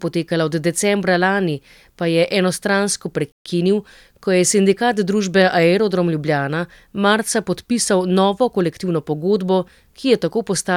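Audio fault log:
3.32–3.46 s playback stall. The speech stops dead in mid-flow for 135 ms, leaving a short gap of silence before the sound comes back. The player likely ran out of buffered data or had its output thread blocked until it recovered.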